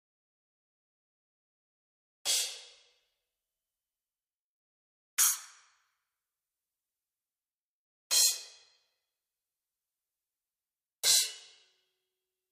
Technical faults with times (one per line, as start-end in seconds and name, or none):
none